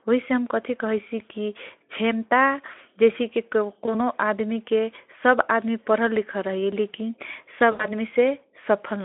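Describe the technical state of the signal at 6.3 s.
At 6.3 s the signal is intact, with the speech carried through the Speex codec and the narrow telephone-style band working as expected and no fault present at that moment.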